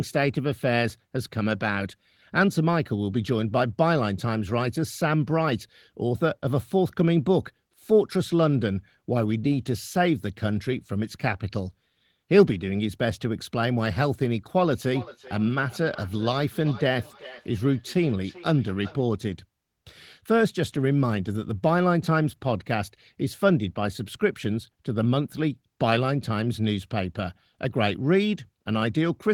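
From 14.84 to 19.05 s there is feedback echo between two devices: a second device in the room replays the call, and its loudspeaker output re-enters the first microphone, which that device's echo canceller cannot remove. Each word returns roughly every 400 ms, thinner and more ringing, at most about 19 dB below the speech. On a spectrogram, fainter, narrower copies of each syllable trail at regular spacing, and the waveform shows small repeated bursts between words.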